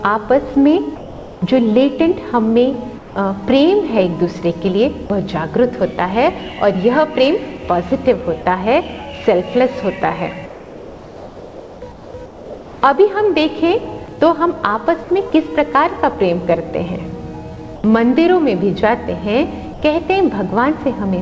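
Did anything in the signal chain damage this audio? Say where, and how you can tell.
Yes. Comfort noise in place of the background at 0.96–1.42, 2.98–3.16, 10.46–12.82, 17.76–17.84 and 19.74–19.82 s: the real background becomes steady, featureless hiss, up to about 5 dB quieter. This is likely discontinuous transmission in call processing.

Sound dropped by the voice detector at 5.06–5.10 and 8.42–8.46 s: brief 40 ms gaps filled with synthetic noise, likely where the sender's detector mistook quiet sound for background.

Sound chopped by the voice detector at 15.04–15.32 s: the sound breaks up, likely from the detector toggling repeatedly. Everything is band-limited to 8 kHz by the call codec.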